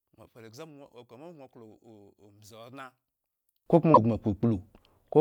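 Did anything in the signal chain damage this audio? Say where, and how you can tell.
Yes, two separate stages left marks.

From the start to 3.66 s, the speech heard in mono is about 26 dB too quiet and sounds faint. That pattern fits one channel inverted, most likely a polarity swap in analogue wiring or a patch lead before the mono sum. When the two channels are added, their shared centre content and low end cancel, leaving only the small difference between them. On a spectrogram, the whole picture is much weaker up to 3.66 s. The waveform shows a low, shrunken envelope that recovers after that point.

At 3.93 to 3.98 s, a 44 ms glitch breaks into the speech, and the audio jumps forward. This is the signature of a broken MP3 bit reservoir, likely caused by frames being lost in storage or transfer of the encoded file. Its length spans about two 26.1 ms frames. The decoder borrowed bits from a frame that no longer exists and rebuilt garbage. 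A spectrogram shows a brief broadband streak or gap, and the waveform shows a discontinuity there.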